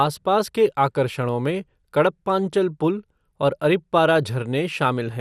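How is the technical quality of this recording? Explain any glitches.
The speech carries plainly audible codec damage for its whole length, most likely MP2 compression. Nothing reaches above 14.4 kHz, so the top sounds dull. Upper sub-bands starved of bits drop in and out, and the coarsely quantised remainder gives a gurgling, granular texture, consistent with a low rate around 80 kbps.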